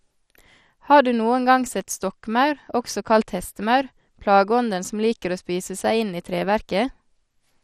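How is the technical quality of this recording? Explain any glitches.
The quality is compromised by clearly audible codec damage. MP2 compression, throughout: the speech sounds dull and gurgling, with nothing above 15.1 kHz. This is likely Layer II coding starved of bits, consistent with roughly 64 kbps, so upper sub-bands drop out and the remaining bands are coarsely quantised.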